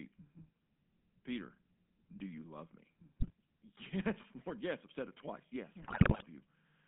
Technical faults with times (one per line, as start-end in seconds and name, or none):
0.00-6.87 GSM full-rate codec
3.20-3.30 GSM bit errors
5.82-6.23 GSM bit errors